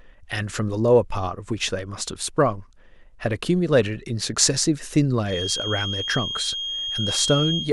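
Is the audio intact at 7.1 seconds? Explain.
No. At 7.1 seconds a feedback whistle sits behind the speech. It starts at 5.22 s and runs to the end of the clip. It is a thin, steady tone at 3.2 kHz, only a little quieter than the speech, and its level swells and fades slowly. The likely cause is a loudspeaker-to-microphone loop balanced right at the edge of feedback. One frequency keeps ringing but never grows into a howl.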